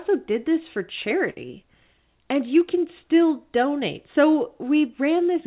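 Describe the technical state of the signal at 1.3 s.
At 1.3 s, right after "did this for", a burst of packet loss runs to 1.38 s. The receiver stretched the last received sound to cover the lost packets, so it holds and fades rather than falling silent. When the audio resumes, the intervening speech is missing.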